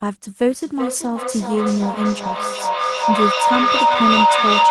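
From 0.48 s to the end, a feedback echo between two devices sets in: a second device in the room replays the call, its microphone recaptures it, and no canceller removes it. The sound returns roughly every 0.4 s, thinning and ringing, and builds to about 4 dB above the speech.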